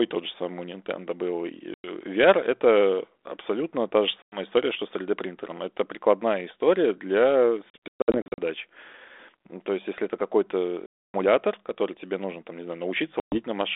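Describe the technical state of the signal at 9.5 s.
At 9.5 s the speech is intact, with nothing beyond the narrow telephone band and light coding texture of the 32 kbit/s G.726 ADPCM path it travels through.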